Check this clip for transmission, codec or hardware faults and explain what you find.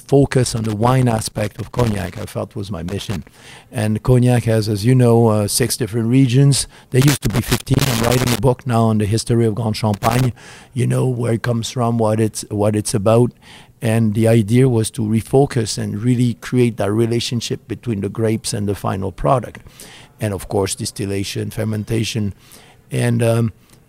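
There's one hardware fault here, a loose connector crackle, showing up four times in this speech clip.

It runs from 0.44 to 2.24 s, just before "felt was my", then 2.89 to 3.51 s, right after it, then 7.02 to 8.39 s, leading into "book now on the", and finally 9.94 to 10.36 s. A worn or dirty contact keeps making and breaking, chopping the signal into irregular bursts of scratchy crackle.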